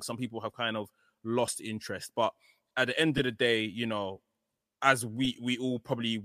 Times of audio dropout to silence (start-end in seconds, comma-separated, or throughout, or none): none